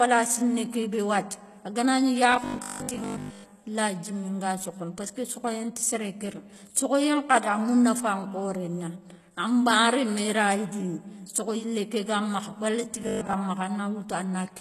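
Across the whole speech recording the treble has a gritty, metallic edge, and s sounds come out lispy. This is likely HE-AAC compression: only the lower spectrum is coded, and the top is rebuilt by copying lower bands upward, so the overtones there don't line up with the real ones. Nothing reaches above 12.3 kHz, and the plainly audible damage fits a low bitrate of around 16 kbps. Unlike a simple low-pass, the top still sounds bright, just falsely so.

From 2.32 to 3.52 s, and again from 13.01 to 13.33 s, the voice turns into a rigid, metallic buzz pitched at 50 Hz that still roughly tracks the speech. That is robotic sound from repeated short buffers, likely caused by audio arriving too seldom so that the last 20 ms is looped in its place. Most of the real audio in those stretches is skipped. A fixed pitch set by the loop length distinguishes this from codec warble or dropouts, which have no steady drone.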